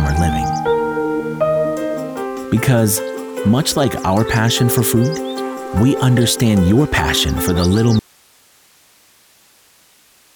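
At about 7.99 s the audio drops out to a faint residue and stays that way to the end. The wanted signal vanishes abruptly, mid-flow, not with a fade, but the line doesn't go dead: what's left is a bed of hiss sitting roughly 35 dB below where the signal was. That tells you the path after the break kept running. The likely cause is the source feed being lost upstream while the input stage stayed live.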